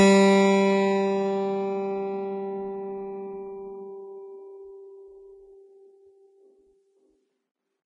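Music throughout, with plainly audible Vorbis compression: nothing above 10.4 kHz and a grainy, hissy top end, likely from a low bitrate around 25 kbps.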